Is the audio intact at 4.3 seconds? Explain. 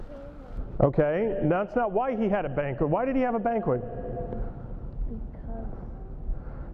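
No. De-emphasis applied wrongly runs from 0.57 s to the end. A treble cut slopes down about 11 dB by 10 kHz, leaving the sound dull and muffled.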